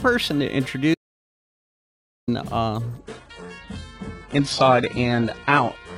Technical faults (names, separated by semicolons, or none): audio dropout to silence; adaptive stream at a lower bitrate